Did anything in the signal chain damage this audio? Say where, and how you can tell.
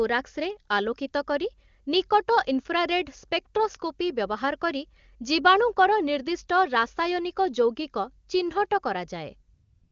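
Yes. AMR comfort noise appears at the codec stage from 9.53 to 9.91 s: speech frames stopped, and a smooth, steady synthetic noise replaced the real background.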